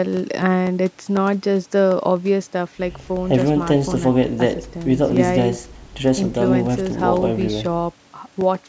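Regular small ticks run through the speech from 0.17 s to 8.41 s, four per second at a steady 0.25 s spacing, about thirty in all. They are heard only where there is signal, over the speech band, which stops at 8 kHz after the call microphone processing. These are periodic USB or driver dropouts. At each interval something stalls the bus or audio driver, and roughly a millisecond of audio is replaced by silence. The abrupt gap produces the click.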